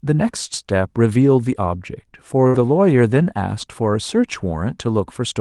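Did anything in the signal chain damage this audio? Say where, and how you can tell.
Yes, at the network stage: a burst of packet loss between 2.47 and 2.57 s, inside a call path whose Opus coding tops out near 12 kHz. For about 64 ms the receiver's concealment extends the last sound and fades it, then playback picks up further on with roughly 60 ms of audio gone. A buffer underrun or driver glitch would drop to silence or click; this synthesized, decaying continuation followed by a skip points to lost packets.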